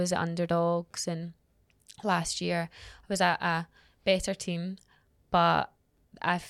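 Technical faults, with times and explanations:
No technical faults can be heard in this recording of speech, and the signal carries through without any audible disturbance to its level, timing or frequency content.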